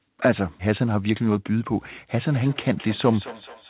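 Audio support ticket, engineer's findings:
Thinning, ringing repeats at roughly 200 ms intervals, 2.22 s to end, peaking about 17 dB below the speech. Feedback echo between two devices: the second device's mic re-captures playback its canceller never sees. Band-limited to 4 kHz, consistent with G.711 A-law.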